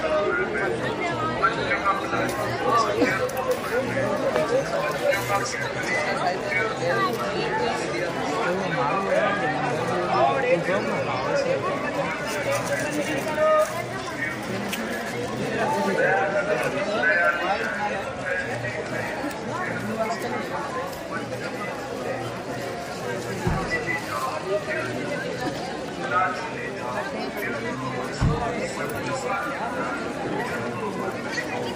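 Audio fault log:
No faults found anywhere in this audio.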